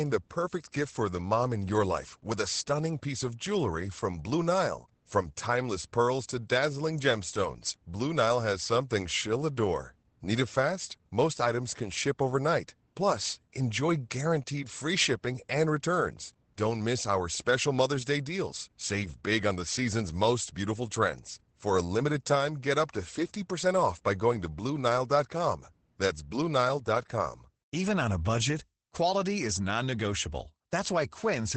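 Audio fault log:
Throughout: Opus voice compression. The speech has been coded with Opus in its SILK linear-prediction mode at wideband, so nothing remains above 8.6 kHz and the top sibilance is gone. The excitation is coded coarsely, which fits a rate of about 12 kbps, and this leaves the speech plainly muffled, hoarse and faintly robotic, coded in 20 ms frames.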